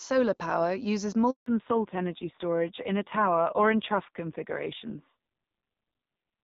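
Speech here, starting out as a clean HD Voice call with only light codec damage, consistent with AMR-WB at 12.65 kbit/s. Right after "power uses", at 1.30 s, there's a handover gap: the call jumps between networks, no speech frames arrive during the switch, and the audio drops out for 160 ms until 1.46 s. Whatever was said in that stretch is simply gone. From 1.46 s to the end, you get a fallback to narrowband. The call slips off HD Voice onto an older narrowband codec, and nothing survives above 4 kHz, so the top end is just cut off. It sounds duller and rougher for the rest of the clip, which fits AMR-NB at around 5.9 kbit/s.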